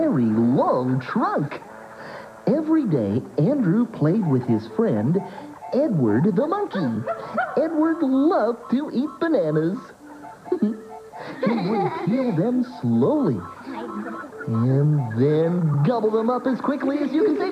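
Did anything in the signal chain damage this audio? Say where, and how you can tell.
No, nothing in the signal chain stood out as having damaged this audio when I listened to it.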